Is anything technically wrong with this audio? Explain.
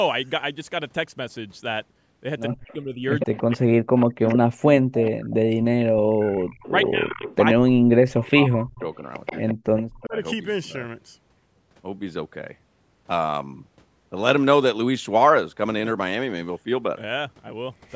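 Yes. Echo leak, from 2.51 to 4.38 s, 5.03 to 5.34 s, 6.2 to 7.36 s and 8.23 to 10.07 s: the far end's echo canceller likely let loudspeaker sound through, so a copy of the speech returns 131 ms late, about 10 dB below the speech at first, then about 15 dB below.

Speech suppressed in double talk, from 2.55 to 8.82 s and 9.53 to 10.16 s: with both sides talking, the canceller likely turned the talker down along with the echo. The speech dips by up to around 40 dB, in pieces totalling roughly four seconds, then half a second.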